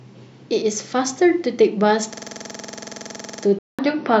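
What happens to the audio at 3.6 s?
At about 3.59 s the speech goes silent for roughly 200 ms, then returns duller and boxier, with nothing above 6 kHz, a change in level of about 5 dB and a faint new noise floor, through to the end. The likely cause is the input switching to a poorer device.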